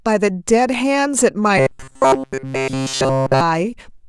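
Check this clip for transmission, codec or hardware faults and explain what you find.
One fault is present: robotic sound from repeated short buffers, running from 1.58 s to 3.41 s. Through that stretch the speech collapses into a rigid, metallic buzz fixed at 133 Hz, roughly tracking the syllables. The likely cause is audio arriving too seldom, so the playback side loops the last fragment, about 7.5 ms long, in place of essentially all of the missing audio. On a spectrogram this appears as a flat comb of harmonics at multiples of 133 Hz. The waveform shows identical cycles repeating every 7.5 ms.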